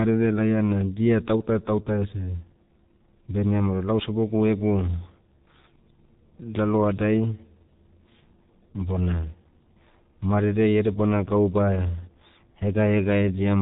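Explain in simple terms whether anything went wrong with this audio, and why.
The speech has been squeezed through the G.723.1 codec, an early internet-phone compressor, and the damage lasts the whole clip. Nothing above about 3.8 kHz gets through, so everything sounds muffled. The codec rebuilds the voice from a rough model that it refreshes only every 30 ms, so consonants smear together and the voice turns heavily hoarse. A simple telephone-style filter would muffle it just as much but leave the voice smooth, not rough.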